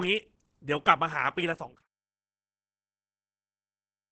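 Throughout the clip the speech was likely squeezed through Opus compression at a very low rate, around 12 kbps, where the encoder falls back to its SILK speech mode and models the voice rather than preserving its full spectrum. The damage is heavy. Nothing reaches above about 8.5 kHz, so the sound is muffled and loses its air, and the modelled voicing comes out hoarse, including through the smooth fade-out that ends at 1.87 s.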